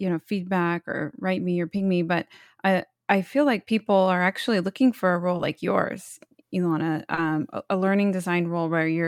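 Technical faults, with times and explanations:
1.77–1.80 s, 5.37–5.40 s and 7.14–7.18 s: short concealed packet loss. Roughly 20–30 ms of the call arrived too late each time, at 1.77 s between "or write me or" and "me but I I" and at 5.37 s between "looking for a role" and "like yours". The receiver extended the preceding sound to fill each gap, which is heard as a brief smear or wobble. On a spectrogram, the last sound is carried on across each gap before it blends back into the real audio.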